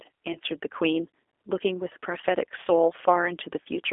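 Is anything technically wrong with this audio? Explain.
Yes. Throughout, the speech sounds narrow, slightly rough and synthetic, confined to roughly 300 Hz to 3.5 kHz. That is the G.729 codec at 8 kbit/s, which rebuilds the voice from a vocal tract filter, a pitch predictor and a few pulses, so the damage is plainly audible.

At 0.33 to 0.38 s and again at 3.64 to 3.69 s, the sound briefly smears into a fading buzzy tone or coloured noise. This is VoIP packet loss concealed by the speech codec: a 20 ms gap, fitting a single lost packet, filled by extrapolating the last pitch and filter with falling gain.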